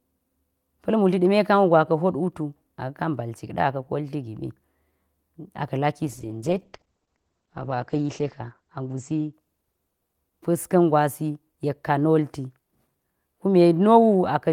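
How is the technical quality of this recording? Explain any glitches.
The recording has one glitch, a call bitrate drop from 6.06 to 11.33 s. The encoder starved of bits, coding coarsely and capping bandwidth; the speech turns muffled and watery, consistent with a fall from about 40 to 10 kbps. On a spectrogram, content above 8 kHz vanishes for roughly 2 s.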